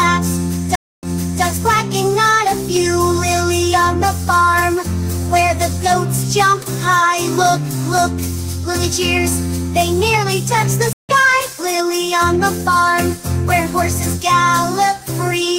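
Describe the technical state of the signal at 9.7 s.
At 9.7 s the signal is intact, with no dropout, distortion, clipping or other fault to be heard.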